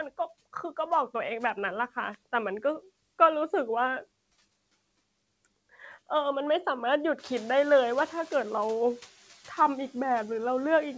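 At about 7 s the room noise jumps roughly 13 dB, and the noise suppressor is caught out. From 7.18 to 8.76 s it's still catching up, so the noise leaks through only lightly reduced, then settles down by about 5 dB once its estimate adapts over those 1.58 s.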